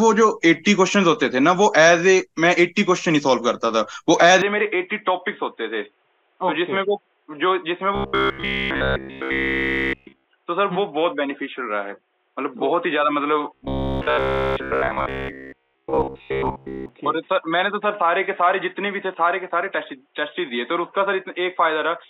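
At 4.42 s the audio turns dull and boxy, dropping a few dB, and gaining a faint new noise floor, likely an input switched to a poorer device. From 7.95 to 10.26 s, and again from 13.55 to 16.89 s, a rigid metallic buzz at 66.7 Hz sets in. This is robotic sound from repeated short buffers, likely one 15 ms block replayed throughout the first stretch and through most of the second.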